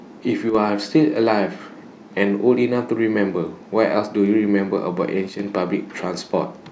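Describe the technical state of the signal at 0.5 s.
One stereo channel likely drops out from 0.50 to 0.55 s, about 50 ms. With only one side feeding the mono sum, the material shared by both channels falls abruptly by about 6 dB and anything present only in the lost side vanishes, giving a brief dip in level.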